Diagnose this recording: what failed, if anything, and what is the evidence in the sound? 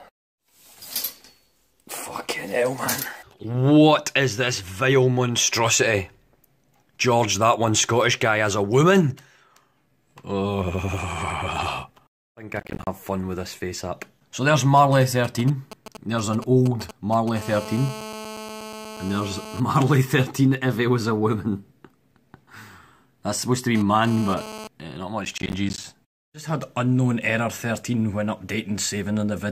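Processor overload crackle shows up twice, from 12.53 to 12.87 s and from 25.25 to 25.84 s. Both are a gritty tearing laid over the sound that stops cleanly once each stretch ends. That's a driver and buffer problem: the processor kept missing its deadlines, and each missed buffer dropped out to silence with hard edges. The gap spacing points to buffers of roughly 10 ms, with something like 20 misses strung together in each burst.

GSM signalling bursts run from 14.77 to 17.38 s. You get that galloping dit-dit-dit of short 217 Hz buzzes, sitting about 15 dB under the programme. The stage is the analogue wiring. A 2G handset nearby was doing its signalling, and the audio circuit rectified the RF pulses into audio. It isn't in the signal chain's own processing at all.

GSM phone buzz follows straight on, at 17.39 to 19.60 s. It's now a hard, raspy, harmonic-rich 217 Hz buzz that holds steady, about 14 dB below the signal, which is a phone in a call. 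It returns from 23.75 to 24.67 s at the same level, this time as the handset pushed data. Again the analogue wiring is acting as a detector for the transmitter's 217-per-second burst rate.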